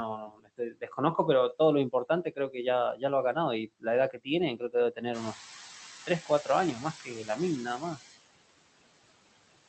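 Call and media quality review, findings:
Noise suppressor artifacts, whole clip: background pushed down by about 19 dB, pumping between phrases and lifting under speech. Suppressor is gating bands it reads as steady noise frame by frame.

Speech cut by the noise suppressor at 0.17–0.98 s (deepest dip about 22 dB, roughly half a second affected), 1.53–2.57 s (about 13 dB), 2.95–3.36 s (about 13 dB), 3.67–5.38 s (about 21 dB, well over half a second) and 6.06–7.99 s (about 15 dB). Soft consonants and endings get swallowed because the suppressor is classing them as noise.

Noise suppressor catching up, 5.13–5.4 s: the room noise jumps by about 14 dB around 5 s and comes through under-reduced, only about 6 dB of cut, for 270 ms until the noise estimate adapts and the floor sinks back.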